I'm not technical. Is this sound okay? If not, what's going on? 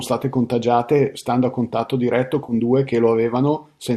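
No. At about 2.44 to 2.53 s there is a brief AAC frame loss with concealment. Roughly 50 ms of the speech never arrived, and the decoder covered the gap by reusing the sound just before it, leaving a short smeared, noisy patch. The link likely uses low-delay AAC compression, the kind used on video calls, and its effect on the sound is light.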